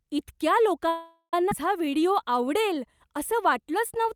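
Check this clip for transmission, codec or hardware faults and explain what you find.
Three network transmission faults are present in this speech clip.

Call audio freeze, 0.88 to 1.34 s. The last sound is stretched into a fading buzz, followed by about 100 ms of silence. Speech then resumes where it stopped. This likely comes from delayed packets emptying the jitter buffer.

Skip ahead, 1.50 to 1.52 s. Roughly a third of a second of speech is dropped. The two sides are joined by a 14 ms bridge, so playback jumps forward abruptly.

Jitter buffer slow-down, 1.85 s to the end. Speech plays at 92% speed with unchanged pitch, adding 182 ms. The receiver repeated pitch periods to rebuild its reserve, so sounds are drawn out.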